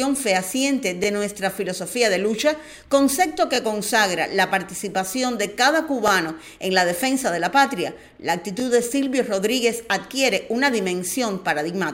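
A short stutter repeats at 1.04–1.06, 3.56–3.58, 6.08–6.10, 8.60–8.62 and 11.12–11.14 s. These are overlapping chunks: each 2.5 s chunk starts 20 ms early, replaying that slice at the join.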